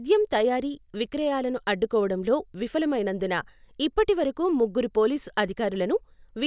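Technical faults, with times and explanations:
No technical faults are audible.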